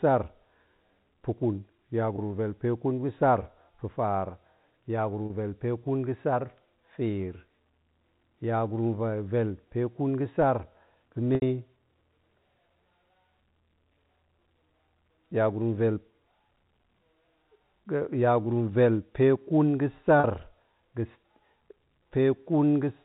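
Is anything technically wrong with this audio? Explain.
Yes, there's packet loss with pitch repetition, in four places: 2.16–2.18 s (20 ms), 5.26–5.30 s (40 ms), 11.35–11.42 s (70 ms) and 20.20–20.24 s (40 ms). The receiver covers each gap by looping the last pitch period and fading it out over about 50 ms. The three shorter gaps come across as a brief held, buzzy tone. The 70 ms one outlasts the fade, so it drops to silence before the speech cross-fades back in. All of this sits on a telephone-band signal that stops at 4 kHz.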